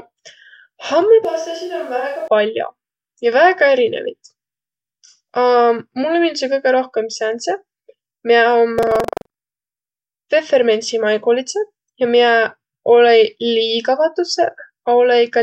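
From 1.25 to 2.28 s the speech turns roomy and hollow, thinner in the bass, about 10 dB quieter, with room noise around 30 dB below it, then snaps back right before "pall'o ja". That's likely a switch to a distant microphone after the close mic dropped out.

Between 8.75 and 10.18 s there's buffer tearing: a robotic buzz at 23.4 Hz, only while someone's talking. The writer and the hardware have slipped, so roughly a tenth of each buffer replays audio about 150 ms old with hard joins, which fits a 2048-sample buffer.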